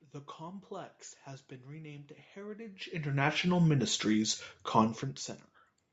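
No technical faults can be heard anywhere in this recording.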